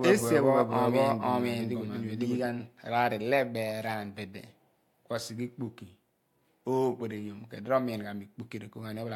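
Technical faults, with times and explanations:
0.00–2.46 s, doubled audio track: the speech is already running with a second, full-band copy trailing it by about half a second at roughly the same level, so everything seems to be said twice, overlapping itself. The copy has no decay or room colour, just a clean repeat, and it cuts out abruptly at 2.46 s. That points to the same audio likely getting mixed in twice, either via a slower second capture path or an edit holding two copies out of step.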